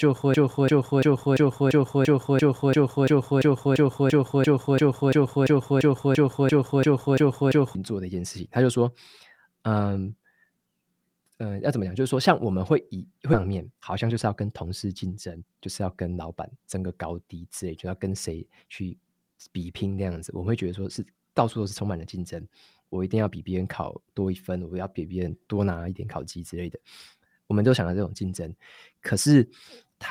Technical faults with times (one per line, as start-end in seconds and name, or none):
0.00-7.75 broken-record loop
13.33 skip ahead
13.45-16.77 jitter buffer speed-up